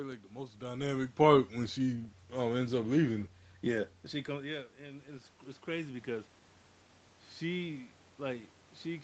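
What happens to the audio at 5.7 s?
At 5.7 s the automatic gain control is partway through a slow gain rise, adding about 4 dB between 4.78 and 6.36 s after the input dropped by about 16 dB. The sound and the room noise behind it swell upward together, gradually.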